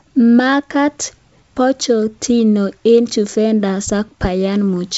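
No technical faults are audible anywhere in this speech.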